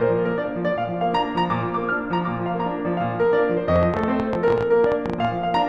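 From 3.76 to 5.55 s there's a train of clicks, around twenty uneven pops at roughly 11.8 per second, jumping well above the music, likely interference.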